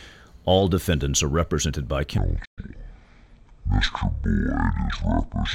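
A speech recording with two faults. After "defendants are represented by", at 2.18 s, there is a section at the wrong speed that runs to the end of the clip. Playback drops to 0.542 times the original rate, so the voice becomes slow and drawn out and its pitch falls by roughly ten semitones, close to an octave. Speed and pitch change together, which is what happens when a stretch of audio is replayed against the wrong clock. The likely cause is a mismatched sample rate or clock at an edit or player stage. Shortly into that slowed section, at 2.45 s, there is a playback stall: the output goes silent for 120 ms and then carries on. The gap sounds like the player briefly ran out of buffered data or had its audio thread held up, which is the likely cause.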